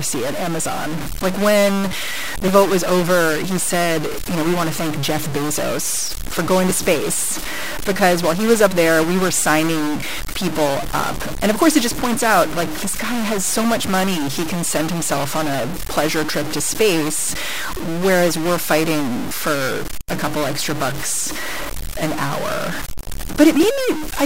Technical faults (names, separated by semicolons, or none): stuck bit; clock drift buffer slips